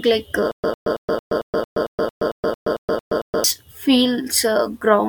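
From 0.52 to 3.44 s the speech falls into a stutter with silent gaps: a 102 ms fragment repeats 13 times, each followed by 123 ms of digital silence, a steady 225 ms cycle. A stalling stream is the likely cause, replaying its last fragment between empty retries. Unlike random dropouts, the identical burst returns at a regular pace.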